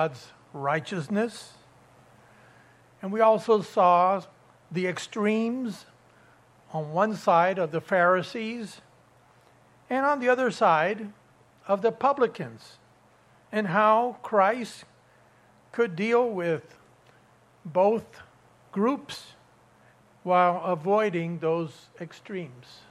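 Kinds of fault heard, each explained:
Nothing stood out on listening; no fault could be heard anywhere in the audio.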